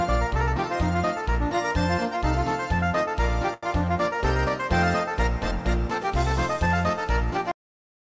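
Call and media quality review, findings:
Short stall from a late packet, 3.54–3.65 s: jitter buffer ran dry, receiver stretched the last sound about 87 ms until the packet landed, then resumed in place. Nothing lost; held sound with slight buzz or dip, latency up 87 ms.

Cut-off end at 7.52 s: final buffers never written or played out. Audio stops mid-sound, straight to digital silence, no decay, through clip end. G.722 call path band-limits everything above 8 kHz.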